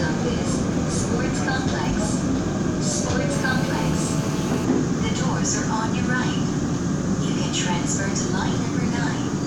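GSM phone buzz runs from 3.33 s to 4.65 s. A nearby 2G handset on a call was transmitting in pulses about 217 times a second, and some part of the audio chain rectified those radio bursts into the signal. The result is a hard, raspy buzz at about 217 Hz, thick with harmonics, sitting about 12 dB below the sound and holding steady for those 1.3 seconds, entirely unrelated to what is being recorded.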